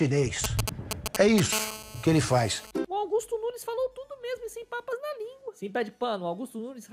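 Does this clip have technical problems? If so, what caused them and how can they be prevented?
Yes. GSM signalling bursts, 0.44 to 1.40 s: a nearby 2G phone's radio bursts are rectified into galloping 217 Hz ticks roughly as loud as the audio. Keep phones well away from the equipment.

GSM phone buzz, 1.53 to 2.71 s: during a call, the phone's steady 217 Hz pulsing is rectified into a raspy buzz about 9 dB below the audio. Switch phones off or to flight mode.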